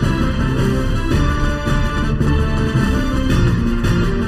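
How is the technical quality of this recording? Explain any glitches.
The recording has one fault, present for its whole length: channel delay (comb filtering). One channel arrives roughly 0.7 ms late, and when the two are summed to mono, content common to both cancels at evenly spaced frequencies, starting near 700 Hz and repeating about every 1.4 kHz (around 2.1 kHz, 3.5 kHz and upward). Those fixed notches give the sound a hollow, phasey colouring that stays put rather than sweeping.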